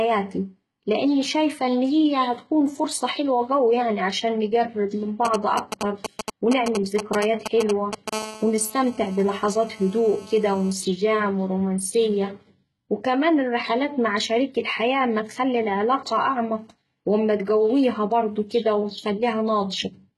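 HE-AAC compression colours the whole clip. The speech has nothing above 11.8 kHz, and the treble below that edge sounds rebuilt rather than captured, with s sounds and other sibilants turning gritty, metallic or lispy. The damage is heavy and points to a low bitrate, around 16 kbps. The likely cause is spectral band replication: the codec keeps only the lower spectrum, then copies those bands upward under a coarse envelope, so the harmonics above the crossover do not line up with the real ones.

GSM signalling bursts start at 5.25 s, right after "يعني عشان نقرب من", and run to 8.10 s. They sound like a galloping dit-dit-dit of short 217 Hz buzzes, about 5 dB below the speech. A 2G phone nearby is sending brief groups of radio bursts while it signals to the network. The audio circuitry rectifies those pulses into sound that has nothing to do with the recording.

GSM phone buzz follows at 8.13 s and lasts until 10.73 s. 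It is a hard, raspy, nearly steady buzz at 217 Hz with many harmonics, about 16 dB below the speech. Here the phone is in a call and transmits bursts 217 times a second without a break. The circuit again demodulates the radio pulses into a buzz that is unrelated to the speech.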